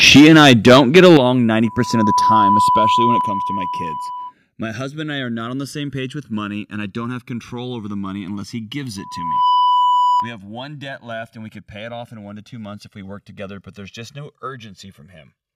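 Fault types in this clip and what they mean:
Channels drifting apart: the two channels run on clocks differing by around 100 parts per million, so the delay between them creeps to about 2 ms by the end. In mono it sounds like slow flanging, and a spectrogram shows comb notches gradually sliding.
Microphone overload: from 0.03 to 1.17 s, peaks likely overshoot the converter's ceiling by about 9 dB, flattening roughly a tenth of the samples. It sounds harsh and crackly. The waveform shows flat-topped peaks, and the spectrogram shows smeared high-frequency energy.
Microphone volume stepped down: the level drops abruptly, likely from the software cutting the input gain, by about 2 dB at 0.17 s, 8 dB at 1.17 s, 3 dB at 2.19 s, 5 dB at 3.21 s and 4 dB at 10.2 s. The waveform envelope shrinks in clean steps.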